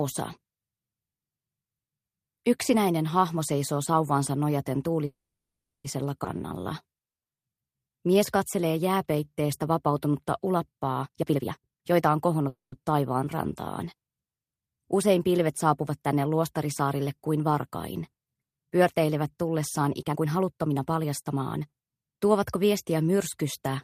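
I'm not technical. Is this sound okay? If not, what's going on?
No, there are a few glitches, all the kind you'd get on a shaky internet call.

Call audio freeze: from 5.05 to 5.86 s, and again from 12.48 to 12.74 s, the sound stalls. The first time it goes quiet for about 0.7 s, the second for about 0.16 s. Then it picks up where it left off. That's likely the data getting held up on the way.

Skip ahead: at 6.24 to 6.27 s it jumps forward, losing nearly half a second of sound with barely any gap.

Jitter buffer slow-down: from 6.38 to 9.48 s it plays at about 87% speed, stretching things out by about 0.4 s to rebuild a reserve.

Jitter buffer speed-up: from 11.02 to 12.48 s it's rushed to about 148%, dropping around 0.7 s. From 19.99 to 21.63 s it runs at about 120%, dropping around 0.3 s.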